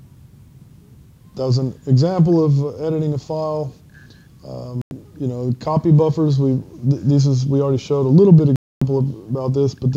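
At 4.82 s the audio drops out for about a tenth of a second, then again from 8.56 to 8.82 s: a digital broadcast dropout. The receiver muted on bad or missing frames, so that stretch is simply gone, consistent with losing roughly three and eight frames.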